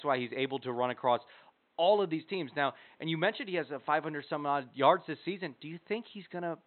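No technical faults can be heard in this recording.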